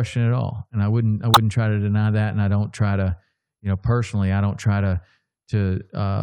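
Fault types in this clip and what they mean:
Corrupt frame decoded: bits inside compressed frames were damaged, and the decoder played those frames instead of concealing them, so misread gains or codes place energy at the wrong frequencies. In this speech clip it occurs from 1.34 to 1.37 s, about 30 ms, which points to a small run of roughly three consecutive frames. It is heard as a brief chirp, squeak, blip or noise burst, with the error energy reaching around -5 dBFS.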